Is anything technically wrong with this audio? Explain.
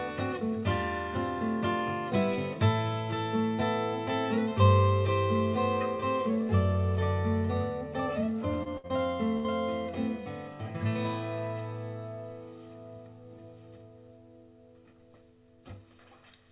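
Yes. Packet losses cluster between 8.6 and 9.5 s. The audio also stops at 4 kHz, which points to a G.711 mu-law call path at 64 kbps.

Short concealed packet loss occurs at 8.63 s and 8.87 s. Each time, about 30 ms of audio failed to arrive. The receiver filled the hole by extending the preceding sound for roughly 24 to 29 ms, then blended back. Each event sounds like a brief smear or wobble.

A burst of packet loss starts at 8.77 s and lasts until 8.87 s, and another starts at 9.37 s and lasts until 9.49 s. About 60 ms went missing in each. The receiver stretched the last sound for 61 to 68 ms while fading it, giving a held buzz or fading hiss. The second burst also drops about 13 ms before playback resumes.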